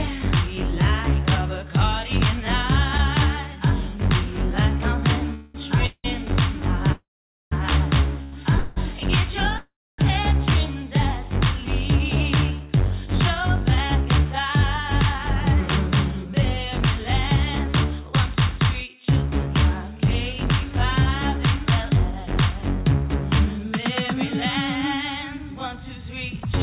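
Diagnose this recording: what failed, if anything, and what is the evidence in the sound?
Call audio freezes at 5.34–5.56, 5.86–6.06, 6.92–7.53, 8.58–8.78 and 9.58–10.00 s happen at the network and jitter-buffer stage. Each holds the last sound as a fading buzz, and the 6.92 and 9.58 s gaps fade to silence. Delayed packets likely starved the buffer, and playback then resumes without loss.

A short stall from a late packet at 8.23–8.34 s stretches a sound by about 87 ms, with a slight buzz or dip, before it continues from the same point. The jitter buffer briefly ran dry and concealed the wait rather than dropping audio.

Jitter buffer speed-up runs from 11.90 to 18.60 s at 105% and from 23.14 s to the end at 103%. The first stretch sounds hurried but keeps its pitch. The buffer trimmed pitch-period slices, roughly 0.4 s and then a tenth of a second, to recover the delay built up earlier. 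The band stops at 4 kHz, which fits a G.711 call path.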